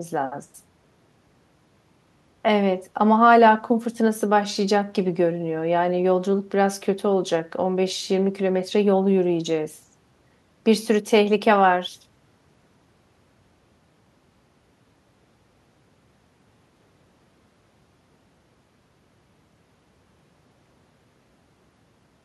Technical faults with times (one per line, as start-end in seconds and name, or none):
none